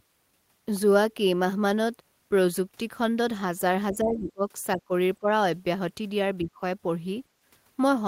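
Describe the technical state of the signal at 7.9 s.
At 7.9 s the speech signal is intact, with no audible technical fault at that moment.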